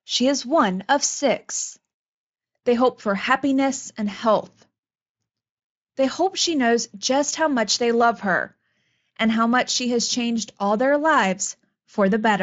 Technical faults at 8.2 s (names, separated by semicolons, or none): drift correction step